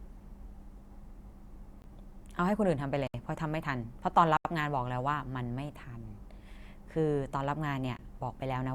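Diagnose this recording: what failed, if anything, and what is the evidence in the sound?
The audio driver or buffer stage failed to deliver samples in time, and blocks of the output were written as zeros: a block of digital silence. The speech drops abruptly to silence and returns with no fade. The drops are at 1.82–1.84 s (20 ms), 3.07–3.14 s (about 70 ms), 4.37–4.45 s (80 ms) and 7.97–7.99 s (20 ms). The short ones are very brief gaps and the longer two brief holes, which points to buffer underruns.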